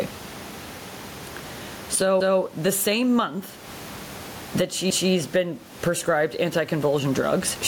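It's a speech clip, and the level pumps throughout, with a swing of roughly 15 dB, so everything sounds squashed. That's gain pumping, likely from the input gain being set far too high and a fast limiter clamping down on every peak. The room noise sits about 34 dB below the speech. There are also overlapping chunks: around 2.20 to 2.41 s and again at 4.90 to 5.11 s, a 200 ms stretch plays twice, giving a stutter at each join. The spacing fits 2.5 s chunks where each new one starts before the previous one finished.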